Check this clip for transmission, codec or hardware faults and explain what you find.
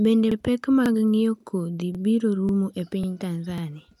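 There's one problem: overlapping chunks. At 0.32, 0.86, 1.40 (right before "kodhi biro"), 1.95, 2.49 (right after "kodhi biro"), 3.04 and 3.58 s, each 0.5 s chunk starts 44 ms early, so that slice replays, giving a regular little stutter.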